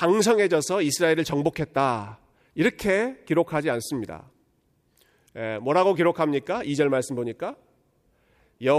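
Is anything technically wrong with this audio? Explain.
No, nothing technically wrong stands out in this speech recording; it all sounds fine to me.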